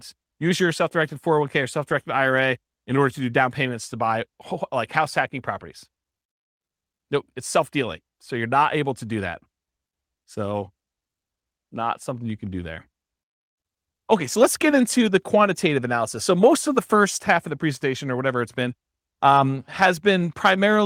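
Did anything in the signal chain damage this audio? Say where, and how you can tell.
No, nothing in the signal chain stood out as having damaged this speech on listening.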